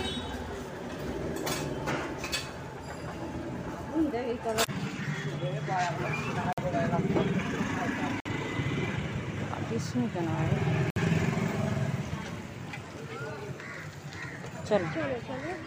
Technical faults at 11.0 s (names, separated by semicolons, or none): Bluetooth stall